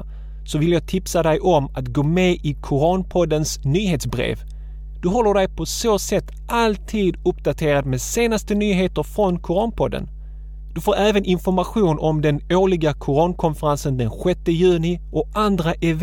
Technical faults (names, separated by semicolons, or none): mains hum